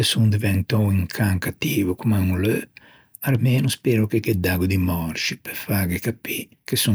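There are no technical faults to describe at any point in this speech clip.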